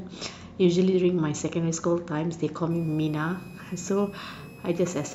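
From 2.71 s to the end of the speech, a switching supply whistle sits under the signal. It's a high tone wandering between about 2.5 and 2.6 kHz, roughly 30 dB below the speech. It comes from a power supply switching in an audible burst mode or beating against another converter.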